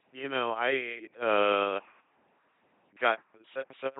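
Speech coded throughout with an LPC-10 vocoder at 2.4 kbit/s gives a buzzing robotic voice with misplaced hiss. Spectrograms show rigid pulse harmonics or flat noise, and nothing above 3.9 kHz.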